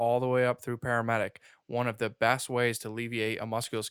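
At 0.63 s, between "the way up" and "through paramedic one of", a single sharp tick cuts through the speech, and at 3.64 s a second, louder tick follows. They peak at about -21 dBFS and about -15 dBFS. Both are bit error spikes: a flipped bit makes a sample leap by a power of two and snap straight back, giving a broadband click unrelated to the speech. The first fits two corrupted samples in a row, the second a single one.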